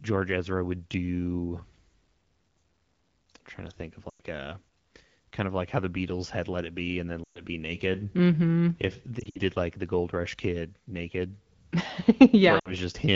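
Lost AMR speech frames at 4.09–4.20 s after "trying to think of", 7.23–7.41 s after "and then", 9.20–9.40 s before "like the" (scattered), and 12.59–12.73 s. The decoder stretches the last good frame with fading gain, producing brief warbles and dropouts.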